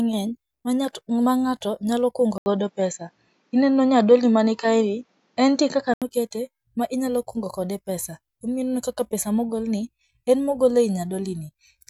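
At 2.38 s, an 80 ms gap. Then the speech turns dull, nothing above 7.6 kHz, until 6.02 s. The input likely switched to a poorer device.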